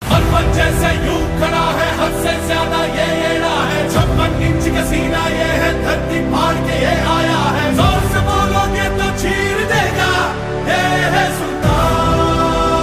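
No technical faults can be heard anywhere in the clip.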